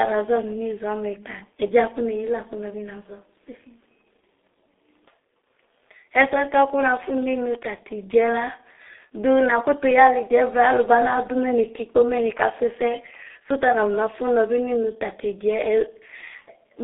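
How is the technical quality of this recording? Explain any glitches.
The quality is poor throughout, limited by the G.723.1 codec. From start to end, nothing above about 3.8 kHz survives. The 30 ms frames and slow voice-model updates, consistent with roughly 6.3 kbit/s, leave the speech muffled, hoarse and heavily smeared at consonants.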